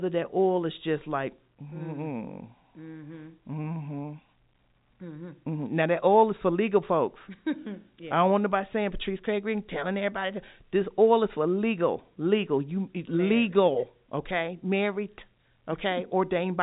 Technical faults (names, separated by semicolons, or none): none